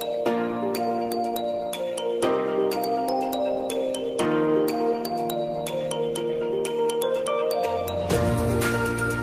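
No technical faults can be heard anywhere in this audio. There is no moment that calls for a time or a cause.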